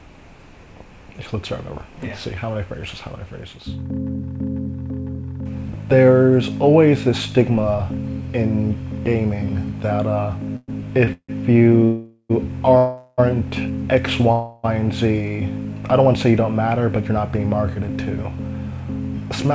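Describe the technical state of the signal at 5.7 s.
At 5.7 s the signal is intact, with no dropout, glitch or distortion, and carries only the steady band limit of a call path with nothing above 8 kHz, which fits a wideband codec such as G.722.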